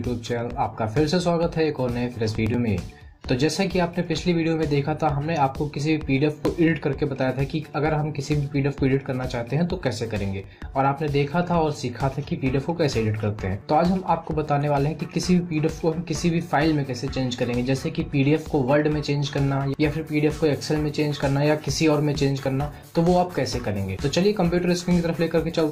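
The audio skips slightly at 2.47–2.51, 6.45–6.50, 10.44–10.48 and 14.48–14.52 s, roughly every 4 seconds. This is overlap between stream segments: adjacent 4-second segments overlap, and about 40 ms of sound is cut at each join.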